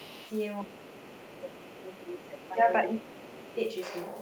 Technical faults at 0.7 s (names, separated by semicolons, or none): speech suppressed in double talk